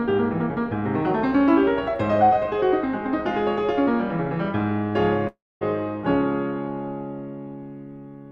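Music, with a long network dropout from 5.27 to 5.63 s: the sound smears into a fading buzz, then goes silent, unlike a brief glitch, and resumes without the missing section, likely lost packets.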